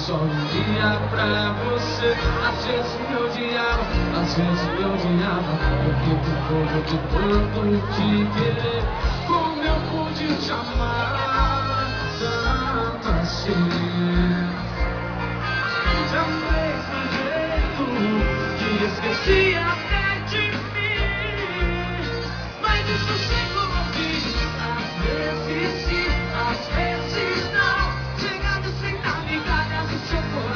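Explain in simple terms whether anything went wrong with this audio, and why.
Nothing went wrong with the way this audio was captured or delivered; the signal holds steady the whole way, with no sudden breaks, gaps or damage anywhere along it.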